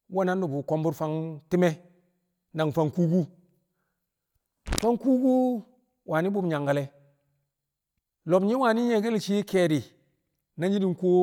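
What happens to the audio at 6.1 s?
Nothing goes wrong at 6.1 s; the speech there plays through cleanly, with no dropout, click, distortion or other fault to be heard.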